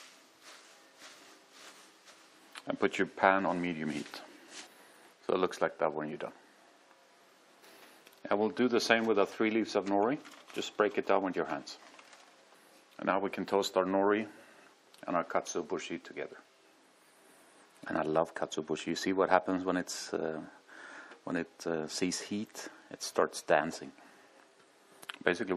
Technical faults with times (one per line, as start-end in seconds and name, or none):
0.00-25.56 MP3 compression